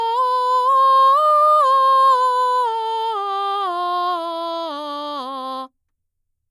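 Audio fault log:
No faults are audible anywhere in this music clip.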